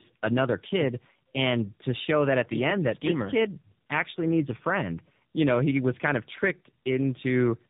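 Tandem speech coding throughout: two successive speech codecs each re-code earlier damage, leaving the speech rough, warbly and muffled, with nothing above 3.7 kHz.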